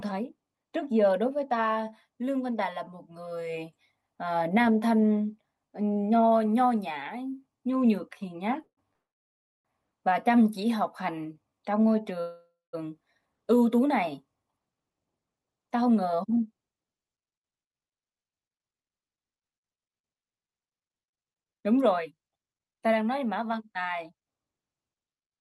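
A call audio freeze at 8.63 s stops the speech for about 0.14 s. The last sound is carried on briefly, then drops to silence for about 90 ms before the speech resumes. The likely cause is packets held up in transit until the jitter buffer ran dry. A second freeze follows at 8.93 s and lasts about 0.71 s, almost all of it silent. Nothing is lost in either freeze, because the audio picks up where it stopped. The pause simply pushes everything after it later.

A jitter buffer slow-down runs from 10.77 to 11.61 s. The receiver repeats single pitch periods and slivers of pause to rebuild its reserve, adding about 100 ms. The speech plays at 89% speed with unchanged pitch, so sounds are stretched and drawn out.

Another call audio freeze at 12.21 s fills about 0.53 s. The held sound fades, then about 200 ms of silence follows before the speech continues. This one is likely again caused by delayed packets emptying the buffer.

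A jitter buffer speed-up from 15.59 to 16.13 s cuts short pitch-period pieces to shed excess delay. The speech runs at 112% with pitch intact, dropping well under a tenth of a second and sounding briefly hurried. A second speed-up from 24.09 to 25.34 s runs at 110% and trims roughly 150 ms, which gives a rushed feel.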